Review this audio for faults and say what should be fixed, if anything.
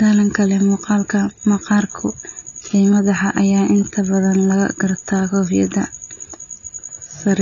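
Throughout, the speech is dull, cut off above 6.9 kHz, with warbling, fizzy sibilants, which a clean low-pass filter would not add: likely AAC compression, fitting about 24 kbps. Encode at a higher bitrate, or keep a lossless master, to prevent it.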